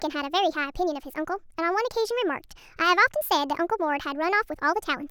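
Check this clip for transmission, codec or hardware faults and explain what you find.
One fault runs through the whole clip. Wrong sample rate, throughout: the speech plays 1.5 times too fast, which fits audio recorded at 32 kHz and played at 48 kHz, so the voice sounds hurried and about 7 semitones high.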